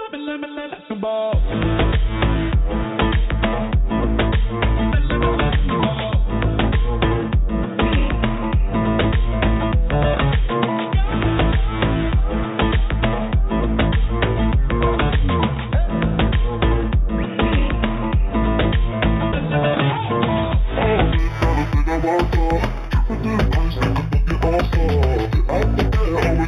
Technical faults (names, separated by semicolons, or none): imaging from linear upsampling